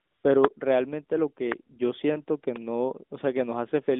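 From 0.00 to 0.24 s the opening is AMR comfort noise. The phone sent no speech frames, so the receiver synthesised a smooth, steady hiss in place of the real background. On a spectrogram it appears as a flat, featureless band within the 200 Hz to 3.6 kHz line band, ending abruptly.

At 1.52 to 1.54 s a loud pop sits on top of the speech, roughly 15 dB above it, most likely a voltage step from a plug, switch or static discharge. The waveform shows a single tall spike, and the spectrogram a thin vertical stripe spanning the whole band.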